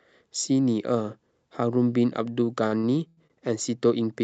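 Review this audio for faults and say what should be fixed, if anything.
Repeated stalls (stutter) from 2.67 to 3.32 s: the jitter buffer ran empty four times, and the receiver stretched the last sound to cover 224 ms in all, the longest gap 97 ms. Nothing is lost, but the speech drags. A spectrogram shows four spots where the harmonics freeze into flat horizontal bands below the 8 kHz ceiling, and the waveform shows short, unnaturally regular repeating stretches. A deeper jitter buffer, or steadier packet delivery on the network side, would prevent it.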